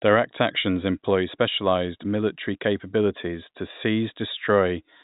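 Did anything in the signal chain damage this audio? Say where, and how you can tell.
No, nothing in the chain damages this speech. It has passed through G.711 telephone coding, which is why nothing reaches above about 3.8 kHz.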